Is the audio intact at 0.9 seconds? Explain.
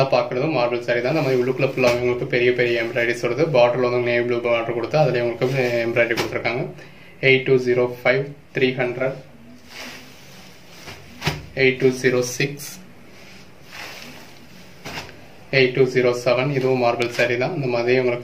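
Yes, at 0.9 seconds the audio is intact, with no dropout, click, distortion or other fault at that point.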